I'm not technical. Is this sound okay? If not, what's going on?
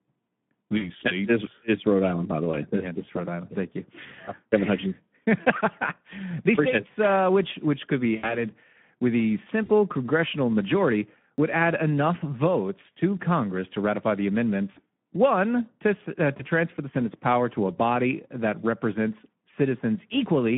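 No. Three problems can be heard in this speech recording.

The first lasts the whole clip. It is damage from the Speex codec, an older method of squeezing speech for internet calls and game chat. At this setting it plainly harms the voice. The speech sounds rough, hoarse and noisy. The sound is also narrow, like a phone line, with nothing above about 3.5 kHz.

The second is VoIP packet loss concealed by the speech codec. Small pieces of the call never arrived. The receiving end filled each gap by stretching the last bit of sound it had. That makes a short buzzy or smeared patch that fades, and the voice stays weak for a moment afterwards. It happens seven times: 0.77 to 0.92 seconds, 2.51 to 2.55, 4.25 to 4.33, 8.16 to 8.36, 9.65 to 9.71, 14.71 to 14.80, and 16.37 to 16.45. The longest gap is the one at 8.16 seconds, which covers 80 ms of missing sound.

The third is a single jump at 11.38 seconds, where the sound skips ahead with no pause. 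A few hundredths of a second are missing there. The likely cause is a dropped buffer (overrun). The computer fell behind and did not collect that piece of recording in time. The piece was overwritten, and the two sides were joined directly.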